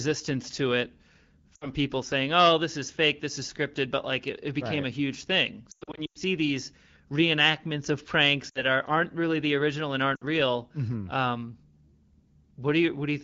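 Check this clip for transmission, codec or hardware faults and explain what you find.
The clip has one fault type, lost AMR speech frames, heard as short warbles or dropouts in the speech:

1.55–1.69 s, before "people saying"
5.71–6.18 s, between "right a huge thing" and "these reenactments of pranks"
8.50–8.65 s, before "are aren't really the"
10.16–10.24 s

The 5.71–6.18 s stretch is the worst, with repeated stutters, the longest about 0.1 s. Radio errors corrupted frames, and the decoder patched each gap with fading repeats of the last good frame.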